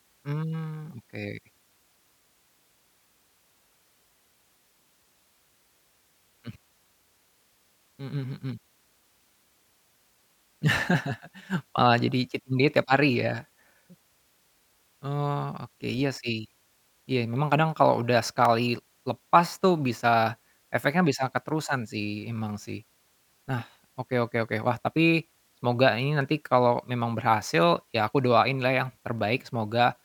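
A handful of samples, likely under half a millisecond's worth, went missing from the stream three times in this speech, so the waveform jumps straight to a later value and leaves a step. These dropped samples remove nothing audible but each gives one sharp click, a thin vertical line in the spectrum: at 15.90 s, at 18.45 s just after "memang kadang kalau udah", and at 29.19 s just after "aku doain lah yang".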